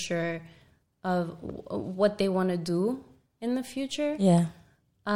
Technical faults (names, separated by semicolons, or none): loud pop